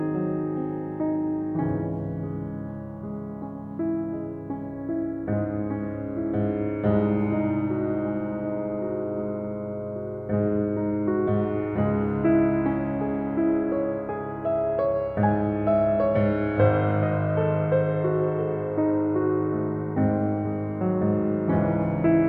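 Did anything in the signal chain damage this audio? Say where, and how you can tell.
No, nothing in the signal chain damaged this music.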